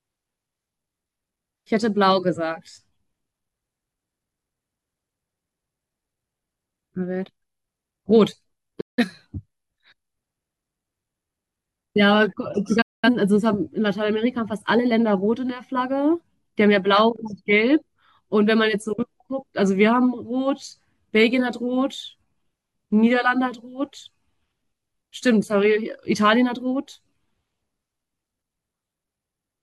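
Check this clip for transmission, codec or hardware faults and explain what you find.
Two digital broadcast dropouts break up the speech. The first runs from 8.80 to 9.04 s, the second from 12.81 to 13.09 s. The receiver lost valid frames and muted until clean ones returned. Each gap fades out over about 8 ms, then goes silent. About 0.17 s and 0.21 s of programme vanish, which fits a handful of lost frames. The speech then resumes mid-flow, and the missing part is simply gone.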